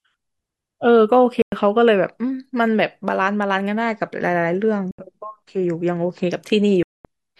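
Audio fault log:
1.42–1.52 s, 4.91–4.99 s and 6.83–7.05 s, Bluetooth dropout: the speech cuts to sudden silence three times, for about 100 ms, 73 ms and 220 ms, and then resumes further along, as though it kept playing through each gap. The likely cause is audio packets missing their deadline on the wireless link to the headphones and being discarded, so nothing plays until fresh packets arrive. The longest hole, near the end, fits a burst of many consecutive lost packets.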